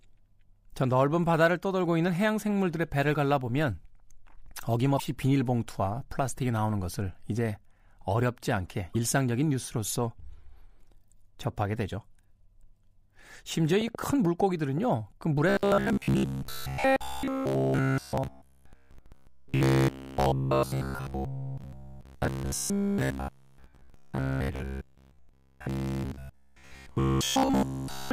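At 4.96 to 5.00 s, and again at 8.92 to 8.96 s, there's damaged data in the compressed stream. A patch of the encoded speech got corrupted, so the decoder misreads those frames, loses sync and has to hunt for the next valid frame header. Each one comes out as a brief glitch, about 40 ms long, where the speech gets mangled for an instant before playback locks back on.

From 13.72 to 14.79 s a train of clicks sits on top of the speech. There are roughly seven sharp pops at about 6.7 per second, spaced unevenly, and they peak around 10 dB above the program level, so they stick out clearly. The clicks all have much the same shape, which points to something injecting pulses. Likely that's interference from nearby equipment or a faulty connection or power supply.

From 15.49 s right to the end at 28.12 s the speech turns robotic, from repeated short buffers. New audio isn't arriving often enough, so the software keeps replaying the last short chunk, and essentially everything you hear is recycled rather than fresh. 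That repetition stamps a fixed buzz at about 66.8 Hz onto the sound, which fits a buffer of roughly 15 ms. The result is a rigid, metallic drone that only loosely follows the speech. Likely an audio device or stream that's being starved of data.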